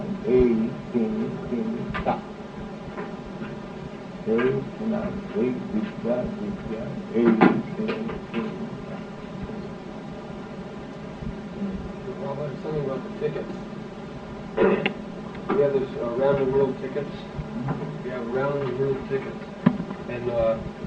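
Channel delay (comb filtering) runs through the whole clip. One channel arrives around 5 ms behind the other, and when the two are summed to mono, the shared content cancels at evenly spaced frequencies. The first notch falls near 100 Hz, with further notches repeating up the spectrum. The result is a hollow, phasey colouring that stays fixed in place rather than sweeping.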